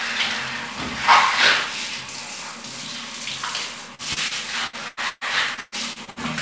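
From 3.95 to 6.19 s there is repeated packet loss (robotic sound). Eleven gaps, the longest 122 ms, are patched by extending the preceding audio, about 28% of the span, so the sound turns choppy. The sound stops above 8 kHz, which fits a wideband call codec.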